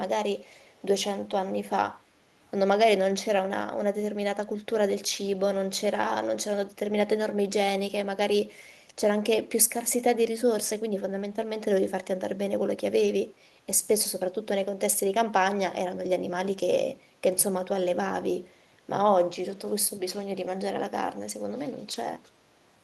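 At 13.05 to 13.11 s, a lost packet rebuilt from error correction: a short stretch of speech, about 40 ms, which fits two lost packets, was filled from low-bitrate redundant copies, so it sounds rougher and noisier without a gap.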